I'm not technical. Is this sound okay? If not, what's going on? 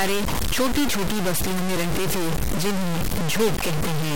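No. From start to finish, the speech sounds gritty and rough. The grit is about as loud as the voice and changes with it. Quiet moments break up or go dead. This is likely low bit depth without dither, with only about 3 bits.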